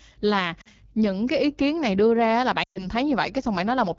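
Speech clip, and the whole thing carries the rough, raspy texture of the AMR wideband (HD Voice) codec running near the bottom of its range. The damage is plainly audible and fits roughly 8.85 kbit/s, where the speech model is too starved to keep voices smooth. There are also lost AMR speech frames in two places. The first, from 0.61 to 0.68 s just before "những cái ý kiến", is a short dip of about 40 ms. The second runs from 2.63 to 2.88 s right after "này đưa ra là". There about 120 ms went missing, and the decoder reused the last good sound with falling gain, dropping to near silence within two frames, then came back weak or rough.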